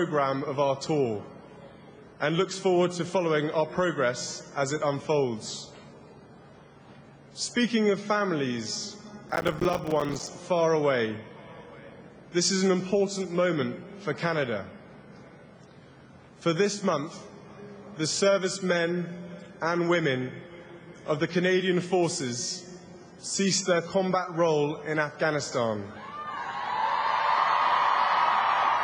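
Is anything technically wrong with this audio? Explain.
Yes. From 9.29 to 10.27 s there is processor overload crackle. The processor could not finish its audio buffers on time, which fits buffers of roughly 5 ms, and it missed dozens of deadlines in quick succession. Each missed buffer was replaced by a short gap of silence with abrupt edges. Strung together over that second, these dropouts produce a gritty, tearing crackle laid over the sound, which stops once the load eases.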